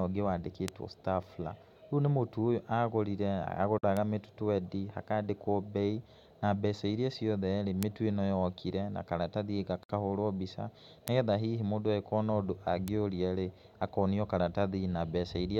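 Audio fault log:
0.68 to 12.88 s, bit error spike: Sharp single ticks at 0.68, 3.97, 7.83, 11.08 and 12.88 s. The one at 11.08 s falls just before "nĩ getha hihi mũndũ". The one at 12.88 s sits between "hihi mũndũ ekuona ũndũ" and "rĩ akonio". Each is a flipped bit in one to three samples. The value leaps by a power of two and snaps back. That brief step has no link to the speech, so it clicks across the whole spectrum.
3.78 to 9.89 s, gap at a join of encoded pieces: Two brief dropouts interrupt continuous speech, 3.78 to 3.83 s and 9.83 to 9.89 s. They last about 49 ms and 60 ms and recur every 6.0 s. The second falls between "mĩtu ĩnoyokire na karatathi" and "mbica nĩ getha hihi". The audio was encoded in separate pieces and joined untrimmed. The encoder's start delay and last-frame padding stay in as silence. The codec smears the edges, and the speech resumes where it stopped.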